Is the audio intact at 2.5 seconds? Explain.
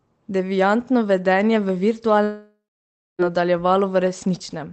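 No. From 2.23 to 3.22 s the sound stops: the last bit smears into a fading buzz, then goes silent, and resumes with almost a second gone. That's a long network dropout, likely packets not arriving while the receiver papers over the gap.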